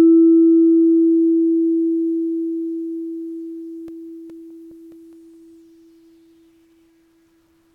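A scratch on the disc destroyed more data than error correction could rebuild, once per revolution, so the player interpolated or muted those samples. In this music, CD scratch ticks result: ten brief clicks, roughly five a second, from 3.47 to 5.34 s, each lasting a few milliseconds at most.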